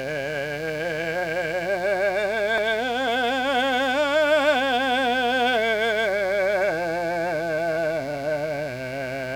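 A steady, raspy buzz sits under the music from start to finish, well below the music at about 20 dB down. This is mains buzz at 60 Hz: sharp switching spikes from something like a dimmer, rectifier or unshielded cable leak into the signal twice per mains cycle, so the interference carries a dense stack of 60 Hz harmonics reaching into the kilohertz range, giving it an edgy rasp rather than a smooth hum.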